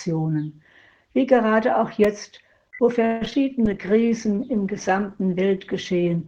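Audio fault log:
2.04 s: block of digital silence. The sound drops out for about 2.7 ms, which fits a missing 128-sample buffer. The hard edges give a brief tick.
3.05 to 3.35 s: repeated packet loss (robotic sound). Four holes, the longest 158 ms, are patched by stretching earlier sound. Most of this stretch sounds choppy and robotic.
3.66 s to end: call bitrate drop. The coding turns coarse and rough, which points to the encoder falling from about 64 to 17 kbps. It stays low.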